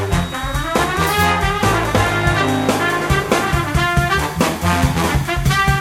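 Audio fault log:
0.0–2.81 s, feedback whistle: a thin, steady tone at 3.8 kHz sits about 20 dB below the music, swelling and fading slowly in level before it stops. This is likely a loudspeaker-to-microphone loop held just at the edge of feedback, so one frequency rings on without building further.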